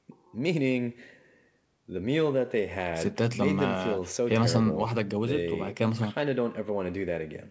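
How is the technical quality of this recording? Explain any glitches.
Nothing stood out on listening to this speech recording, which carries the narrower sound of a wideband call path with no content above 8 kHz.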